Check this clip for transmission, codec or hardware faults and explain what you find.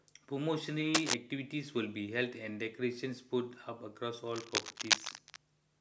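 Cable scratch noise occurs twice, from 0.94 to 1.14 s and from 4.27 to 5.36 s. Dense, uneven bursts of scratching sit over the speech, louder than it at first and roughly equal later. The likely cause is a worn cable or connector being moved, its contact resistance jumping rapidly.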